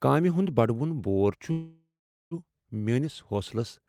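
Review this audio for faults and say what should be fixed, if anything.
From 1.51 to 2.34 s the speech stops and a call audio freeze fills the gap: the last sound is stretched into a fading buzz or hiss, ending in about 0.42 s of silence, then speech resumes exactly where it left off. Nothing is lost, so unlike a dropout it adds about 0.8 s of delay rather than skipping content. The likely cause is packets held up in transit until the jitter buffer ran dry. Prevent it with a steadier network path and adaptive jitter buffering.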